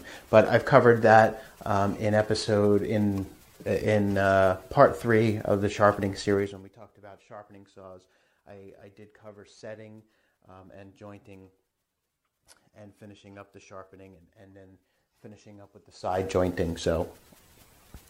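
Zipper noise shows up from 6.32 to 6.74 s, where the level drops by around 25 dB in steps of about 1 dB rather than as one continuous glide. The steps come roughly fifty times a second, and each jump puts a tiny click into the audio, so you hear a fine ticking or zipping riding on the sound until the drop finishes.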